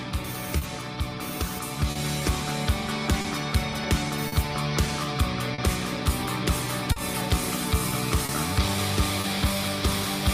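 Short hold-ups run through the whole audio, and they trace back to clock drift between sender and receiver: the sending clock runs roughly 3 percent slow, so the receiver's jitter buffer keeps draining and has to cover the shortfall. That steady underlying cause explains why the hiccups keep arriving at uneven spacing instead of as one isolated glitch. Most of them are heard as short stalls from a late packet, at 0.57 to 0.63 s, 1.91 to 1.97 s, 3.21 to 3.26 s, 4.28 to 4.34 s, 5.54 to 5.60 s, 6.92 to 6.98 s, 8.26 to 8.31 s and 9.21 to 9.26 s. Each time the buffer runs empty, the last sound is held for 30 to 40 ms, and playback then resumes from exactly where it stopped. The result is a brief smeared or buzzy sustain, with nothing skipped. At 3.84 s and 7.21 s the sound behaves the opposite way. The audio makes an abrupt jump forward, with roughly 40 ms of material gone and the two sides butted together without any gap or held sound. 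This is likely a dropped buffer (overrun), where the samples were overwritten before the program read them. A stall stretches the sound and loses nothing, while these jumps cut straight past a piece of it.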